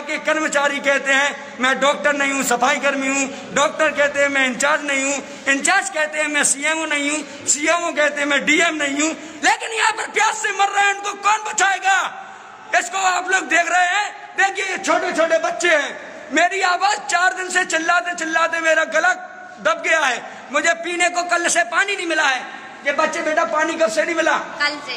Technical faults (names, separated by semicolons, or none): drift correction step